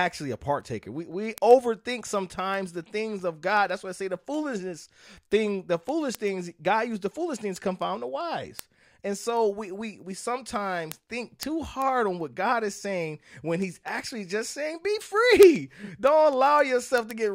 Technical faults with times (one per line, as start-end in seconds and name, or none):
0.22-17.24 word clock ticks